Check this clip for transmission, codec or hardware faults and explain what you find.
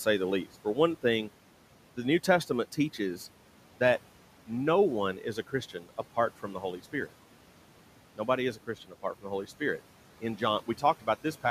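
Two spots where the noise suppressor bites into the speech itself, so it's speech cut by the noise suppressor twice. The first runs 5.74 to 5.90 s, right after "no one is a" and before "apart from the", dipping by about 12 dB. The second sits at 8.55 to 8.94 s, just ahead of "from the", dropping about 11 dB. Each time the suppressor mistakes quiet speech for background and turns it down with the room noise, which sits about 20 dB under the speech. Roughly a tenth of a second goes faint or swallowed in each case.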